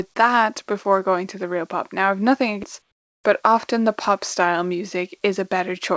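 From 2.92 to 3.24 s, the sending side has most likely stopped transmitting during a pause in the speech, and the receiver fills the gap with comfort noise in place of the background. For those 320 ms the real room tone, already about 53 dB below the loudest speech, gives way to a smooth, featureless hiss about 18 dB quieter, so the background briefly drops away and then snaps back. Across the clip, the call path's band limit leaves nothing above 8 kHz.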